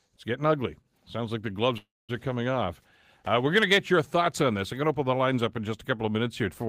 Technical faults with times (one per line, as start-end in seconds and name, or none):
1.77-2.11 call audio freeze